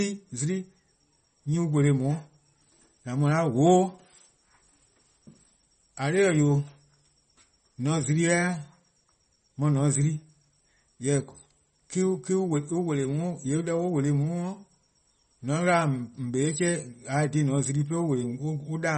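From start to finish the speech has a hard ceiling at 8.4 kHz and a watery swirl, likely MP3 compression starved of bits, which fits a low bitrate around 32 kbps.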